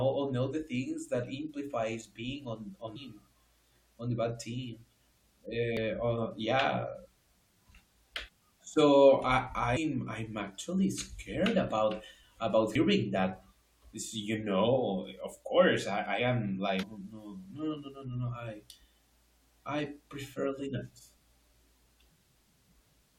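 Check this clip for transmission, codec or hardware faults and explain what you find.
The speech shows one recurring fault: damaged data in a compressed stream, as five brief glitches at 2.95 to 2.97 s, 5.77 s, 9.76 s, 12.74 s and 16.82 s. Corrupted frames are misdecoded and the decoder loses sync hunting for the next header, producing a chirp, squawk, click or short hole. Plain dropouts or concealed packet loss would instead leave silence or a smoothed gap.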